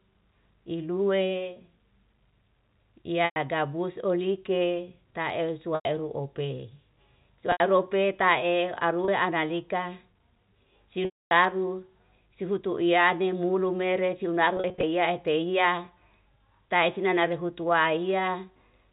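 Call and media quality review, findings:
Packet loss with pitch repetition at 3.25 s (0.11 s), 5.75 s (0.10 s), 7.52 s (0.08 s), 9.05 s (0.03 s), 11.05 s (0.26 s), and 14.57 to 14.83 s (scattered, runs up to 0.04 s). Last pitch period looped to fill gaps: short ones buzzy and held, 11.05 s fading to silence. Gap sizes fit 10 ms packets on the G.711 narrowband path.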